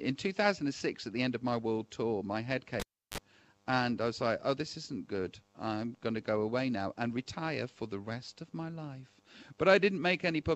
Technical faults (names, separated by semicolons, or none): cable pulled and plugged in